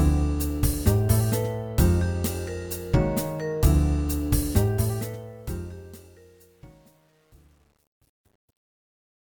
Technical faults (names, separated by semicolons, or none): truncation distortion on a fade